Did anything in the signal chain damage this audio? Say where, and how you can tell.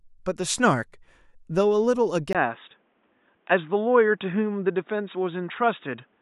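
Yes. At 2.33 s, after a 20 ms gap, the speech turns dull and boxy through to the end, with nothing above 3.8 kHz. The level barely changes, but a faint new background noise appears. At the input stage, this is likely the input switched to a poorer device.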